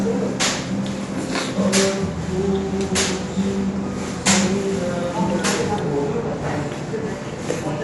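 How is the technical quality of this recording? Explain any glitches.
The quality is noticeably degraded by lossy coding throughout. This is likely Dolby Digital compression at a low rate, consistent with roughly 64 kbps. The encoder cut the band, leaving nothing above 11.5 kHz, and starved many frequency lines of bits. The audio sounds plainly dull, with rough, fluttering noise clinging to tonal parts.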